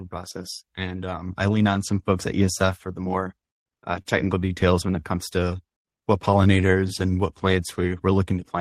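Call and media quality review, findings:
Sound held too long with a slight buzz or dip, 4.02–4.07 s, about 31 ms stretched, nothing lost. Short stall from a late packet: jitter buffer ran dry and the receiver extended the last sound until arrival.

Drawn-out speech at unchanged pitch, 4.86–5.63 s (92% speed, 69 ms added) and 6.03–6.62 s (94%, 47 ms added), ending just before "and what plants". Jitter buffer slow-down: repeated pitch periods to rebuild its reserve.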